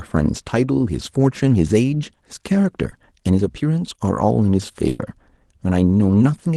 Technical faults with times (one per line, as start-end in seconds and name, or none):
2.89-2.93 short concealed packet loss
4.89-5.01 burst of packet loss